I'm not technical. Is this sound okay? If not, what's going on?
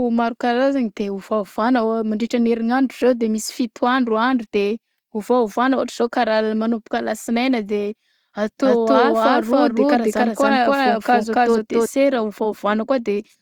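No. From 8.64 to 11.86 seconds there is a doubled audio track. The speech plays twice, with a second, equally loud copy about a third of a second behind. It starts and stops suddenly, likely from the sound being recorded twice through a slower path.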